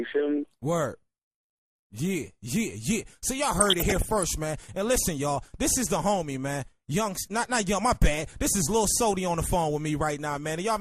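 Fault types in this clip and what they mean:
MP2 compression: The whole clip sounds dull, with a granular, gurgling edge, which most likely points to MPEG Layer II coding at a low rate, around 80 kbps. With too few bits to go round, the coder shuts off upper sub-bands and quantises the rest coarsely. On a spectrogram the top end is cut off and blotchy, with high bands blinking on and off in blocks.
DAB burbling: From 3.59 to 4.23 s, 27 frames are hit by bit errors at a rate of roughly 0.5%, putting burbling blips over the audio. This is what weak DAB reception sounds like when bit errors slip past error correction into the MP2 data. Corrupted samples put short blips of noise in single sub-bands, and corrupted scale factors make sub-bands jump in level for up to a frame. On a spectrogram this shows as scattered bright rectangular patches in isolated bands.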